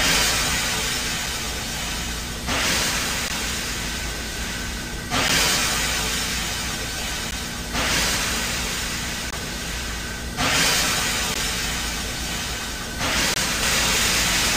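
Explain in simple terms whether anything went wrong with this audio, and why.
The player's stream segments, each two seconds long, didn't line up, so it filled tiny holes with silence. These gaps between stream segments sound like brief, sharp dropouts at 1.26, 3.28, 5.28, 7.31, 9.31 to 9.33, 11.34 and 13.34 to 13.36 seconds. No sound is missing.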